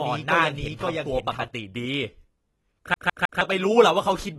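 From the first moment to 1.48 s there's a doubled audio track: a full-band copy roughly half a second behind and about as loud, already running when the clip opens and cutting off abruptly. Most likely the same audio was captured twice or two copies were left out of step in an edit. Throughout, the sound is dull and smeared with nothing above 12.1 kHz and a fizzy, warbling edge, likely heavy AAC compression, with damage that points to around 32 kbps. At 2.94 to 3.41 s it's a CD stuck on one turn, where a 156.6 ms slice plays three times with tiny mutes at each jump, giving that quick, even skipping-disc stutter.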